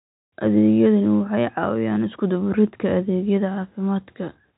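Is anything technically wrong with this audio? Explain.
No, nothing's wrong with this speech clip; it just has the narrow, slightly boxy sound of an ordinary G.711 telephone line, with nothing above 4 kHz coming through.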